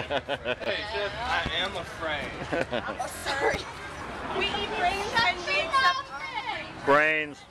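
At 0.58 to 0.66 s the sound jumbles briefly: chunks out of order. A 20 ms chunk plays three chunks late, so nothing is lost but the sequence is scrambled, leaving hard joins. At 1.46 s a loud pop lands about 15 dB above the signal, a sharp single transient with the audio continuing underneath. At 3.16 to 3.23 s repeated frames produce a rapid stutter: a 23 ms block plays three extra times, adding about 70 ms. Similar pops follow at 3.54 s and 5.19 s, each about 15 dB over the material, likely from a voltage step such as a switch, plug or static discharge. At 6.39 to 6.50 s a longer 116 ms block plays once more, a single audible skip-back that adds 116 ms.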